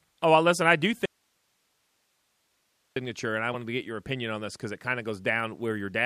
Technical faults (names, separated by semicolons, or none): audio dropout to a faint residue; damaged data in a compressed stream